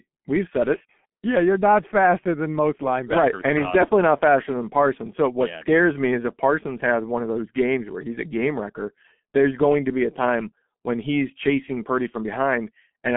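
Throughout, a G.723.1 codec, likely near 6.3 kbit/s, removes everything above 3.8 kHz, leaving the speech muffled and hoarse with smeared consonants.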